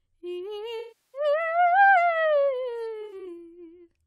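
AAC frame loss with concealment hits this music at 0.79–1.21 s, decaying into near-silence and fading back, then at 3.01–3.27 s as brief smeared, phasey dropouts.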